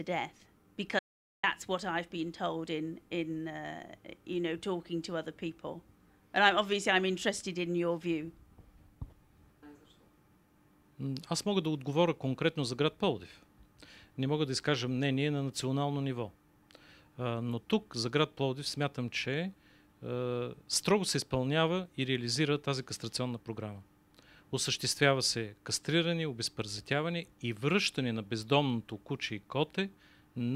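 The input was likely lost briefly, an audio dropout to silence from 0.99 to 1.43 s: about 440 ms of silence, no room tone, with that sound gone.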